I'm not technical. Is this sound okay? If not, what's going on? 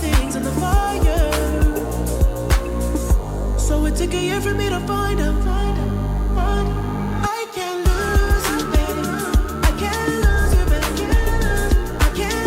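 No, there's a thin, steady buzz under everything, start to finish. That's DECT cordless phone buzz: a cordless phone or its base nearby sends a radio pulse a hundred times a second, and the audio gear turns it into a faint, constant hum.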